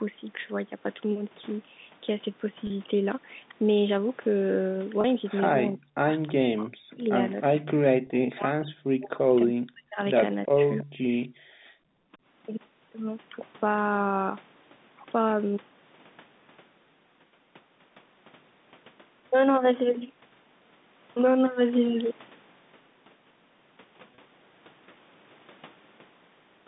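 At 2.67 s, 5.01 s, 8.07 s and 24.15 s there is packet loss with pitch repetition. Each gap is 30 ms long. The receiver fills the hole by repeating the last pitch period of the speech. At this length nothing fades to silence. Each event sounds like a brief held, buzzy tone before normal speech resumes. The G.711 telephone band, about 150 Hz to 3.7 kHz, stays in place through these repairs.

From 5.67 s to 11.29 s the speech keeps dropping away in bursts. This is speech suppressed in double talk. It is likely caused by both sides talking at once. The echo canceller cannot separate the near voice from the loudspeaker echo, so it turns everything down. The affected spans are 5.67–6.0 s, 6.3–7.14 s, 7.45–7.53 s, 7.74–9.98 s, 10.46–10.6 s and 10.81–11.29 s. The deepest dips reach roughly 40 dB. The voice sinks, thins or cuts out in pieces. The long stretch from 7.74 s loses about two seconds in total. 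The 8.07 s packet loss falls inside it.

Between 6.27 s and 6.32 s a faint delayed copy of the voice appears. This is echo leak, likely from a loudspeaker on one side of the call. Its echo canceller let part of the microphone pickup through, and that part was sent back. The copy lags by 325 ms and sits about 25 dB below the speech. It is heard as a short scrap running into the start of the 6.3 s suppression.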